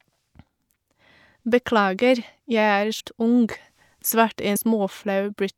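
At 2.99 s and 4.55 s, compressed frames are skipped. The speech leaps ahead by about a fifth, then a tenth, of a second of 24 ms frames, leaving a sudden jump rather than silence.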